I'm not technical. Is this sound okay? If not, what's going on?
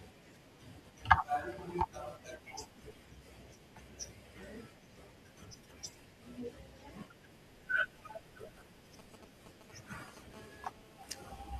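No. From 8.99 to 10.19 s there are GSM signalling bursts. A nearby 2G mobile phone briefly contacts its network, causing galloping ticks and short buzzes. From 10.34 to 11.51 s comes GSM phone buzz. It is a steady, raspy buzz from the phone transmitting during a call, pulsing 217 times a second.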